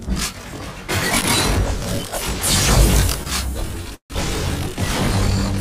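Running through the whole audio is channel delay (comb filtering): one channel trails the other by roughly 20 ms, and when the two are summed to mono, everything they share cancels at a series of evenly spaced frequencies starting near 20 Hz. The result is a rough, slightly doubled sound. On a spectrogram this appears as fine, closely packed horizontal stripes of missing energy that stay put for the full clip.

At 3.94 to 4.13 s there is a call audio freeze. The sound turns into a held, fading buzz and then drops out completely for about 110 ms before resuming. About 156 ms is filled in altogether, and nothing of the original is lost, so everything after 4.13 s arrives that much later. The likely cause is late packets draining the jitter buffer. On a spectrogram, the sound's last moment is smeared flat into a decaying band, followed by an empty gap. The waveform shows a shrinking repeated pattern and then a flat line.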